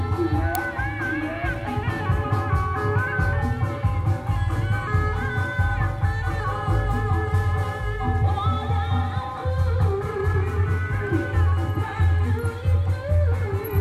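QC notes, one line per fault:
0.55 s, uninitialised buffer: a tiny, very loud digital crack, about 1.3 ms long, where leftover memory got played as samples, which fits a 64-sample block.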